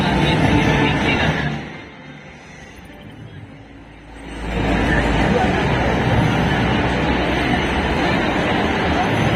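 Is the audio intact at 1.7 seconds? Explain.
No. A fast zipping tick rides on the sound from 1.28 to 1.92 s: zipper noise, a roughly 20 dB drop applied in 1 dB steps about thirty times a second.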